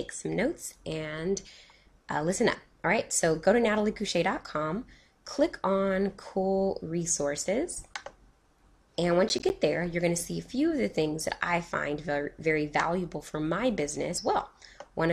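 Processor overload crackle runs from 9.29 to 9.5 s. The processing could not finish its small audio buffers on time, so a run of deadlines slipped past. Each miss drops out as a short hole of silence with abrupt edges, consistent with buffers of about 10 ms, and around five such gaps fall close together. The result is a brief gritty crackle laid over the sound, which clears as soon as the load eases.

A stream segment skip, or something very like it, occurs at 14.17 s. Here the sound lurches forward abruptly, as though a stretch of material is simply absent, and the join carries a small click-like blip where the two unrelated pieces of audio meet. The likely cause is a segment of the stream that failed to arrive, with the player moving straight on to the next one.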